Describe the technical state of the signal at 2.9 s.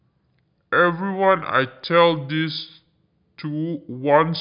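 At 2.9 s the speech is affected by a wrong sample rate fault that runs through the whole clip. The samples are played back slower than they were captured, with no conversion, which fits audio recorded at 24 kHz and played at 16 kHz. Speed drops to about two thirds and pitch falls about 7 semitones, so the voice sounds low and slow. On a spectrogram, harmonics and formants sit lower and are stretched in time. On the waveform, each cycle is longer.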